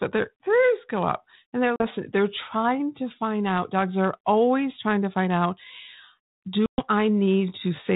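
At 1.76 s and again at 6.66 s, packet loss on an ADPCM call cuts hard-edged silent gaps, 40 ms and then 120 ms long, in the band-limited sound of what fits 32 kbit/s G.726. The decoder's predictor loses track, so speech returns slightly distorted before it settles. Flat-line waveform gaps, blank spectrogram columns.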